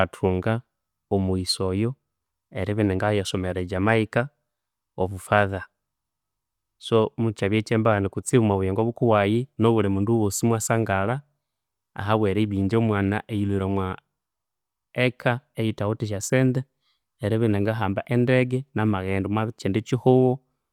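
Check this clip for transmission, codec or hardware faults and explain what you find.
Nothing in this speech recording gives away a problem with the way it was sent, encoded or captured, so there's nothing to flag here.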